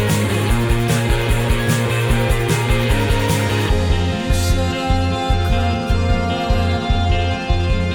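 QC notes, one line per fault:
No faults found in this music clip.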